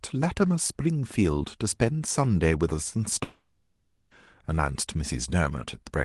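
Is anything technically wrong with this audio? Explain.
Yes. From 3.23 s to 4.14 s the speech breaks up in what sounds like a long network dropout. For about 0.9 s, the receiver most likely got no audio at all. It fills the gap by stretching the last sound into a synthetic buzz or hiss that fades away. Only a brief moment of near-silence follows. The speech then resumes, with that stretch simply missing. The sound passes through a call codec whose top end stops near 12 kHz.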